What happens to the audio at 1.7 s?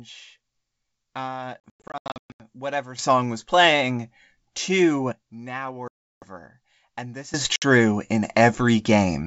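Packet loss on an ADPCM call runs from 1.65 to 2.42 s: about 540 ms of sound drops to silence in hard-edged gaps, the longest 120 ms. After each gap the decoder's predictor and step size have drifted, so speech resumes slightly distorted before settling.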